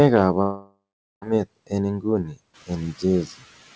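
From 0.42 to 1.24 s the speech breaks off in a long network dropout, most likely a run of lost packets on the link. The receiver fills the gap by stretching the last sound it had into a buzzy tail that fades away. The final 0.42 s or so is plain silence. When the speech resumes at 1.24 s, roughly 0.8 s of it is simply gone rather than delayed.

At 2.24 to 2.38 s the noise suppressor cuts into the speech itself, mistaking a quiet stretch for background. Over about 150 ms the level falls by about 15 dB at its deepest, so that portion sounds swallowed and faint against its surroundings. Shortly after, around 2.5 s, the room noise rises by about 12 dB but stays about 21 dB below the speech. Throughout, the G.722 call path leaves nothing above 8 kHz.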